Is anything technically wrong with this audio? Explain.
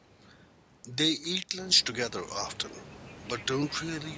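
No, nothing in this speech clip points to a technical fault. The room noise around the microphone rises by about 14 dB at roughly a second and a half but stays about 18 dB below the speech, and the call's microphone processing leaves nothing above 8 kHz, both of which are normal here.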